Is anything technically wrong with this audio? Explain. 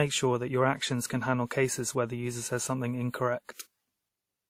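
Yes. The speech carries artefacts from more than one lossy codec, present for the whole clip. The likely cause is transcoding between lossy codecs: a low-rate codec such as Opus at about 32 kbit/s, then re-encoding with WMA at around 64 kbit/s. The second encoder spends bits reproducing the first one's artefacts and adds its own. Both sets of artefacts are heard together. Nothing is present above 19.4 kHz.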